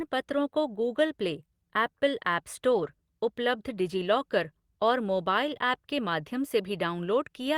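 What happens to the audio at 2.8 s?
Around 2.71 to 2.89 s you're hearing a lost packet rebuilt from error correction. Several separate packets went missing there, but each following packet carried a low-bitrate backup copy, and the decoder played those copies instead. So there's no dropout, just brief stretches where the speech turns rougher and noisier. In total they add up to about 100 ms of rebuilt audio, which fits five 20 ms packets.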